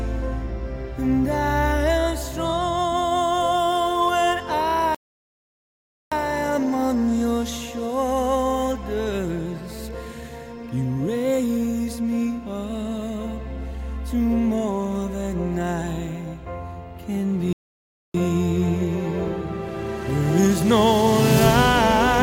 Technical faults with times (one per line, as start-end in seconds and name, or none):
4.95-6.12 playback stall
17.53-18.14 playback stall